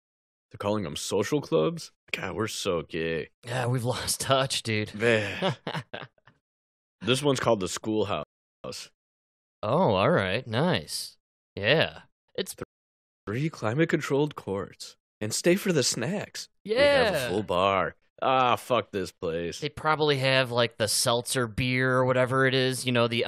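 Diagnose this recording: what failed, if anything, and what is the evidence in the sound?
The player's buffer ran dry twice during streamed playback of this speech, a rebuffering stall at the delivery and playback stage. The audio cuts to silence at 8.23 s and picks up again at 8.64 s, then stops again at 12.63 s and resumes at 13.27 s. Each time the speech continues from exactly the point where it halted, with nothing skipped, so the only damage is about 0.41 s and 0.64 s of inserted silence, just over a second in total.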